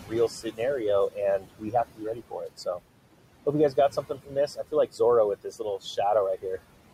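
Noise suppressor artifacts run through the whole recording. The suppressor pulls down bands it judges to be steady noise, frame by frame, by about 18 dB, so the room noise, sitting about 16 dB below the speech, drops away in the gaps and comes back up underneath the speech.

Speech cut by the noise suppressor occurs at 0.03 to 0.12 s, 0.29 to 0.6 s, 1.39 to 1.74 s, 1.95 to 2.8 s and 4.03 to 4.35 s. Parts of the speech were treated as noise and attenuated, by about 11 to 19 dB at worst, making syllables sound swallowed or faint.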